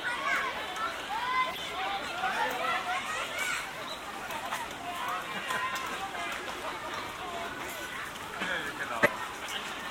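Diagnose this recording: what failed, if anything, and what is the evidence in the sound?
The codec stage failed: corrupt frames were decoded and played. Short bursts of misplaced energy break through the everyday sound at 1.50 to 1.59 s, 4.54 to 4.56 s, 6.44 to 6.46 s and 9.02 to 9.08 s. They sound like blips and chirps. The last peaks near about -10 dBFS and the third is faint, near about -40 dBFS. Each lasts one to three frames. Flipped bits gave wrong gains or codes, so the decoder rebuilt nonsense for each damaged frame.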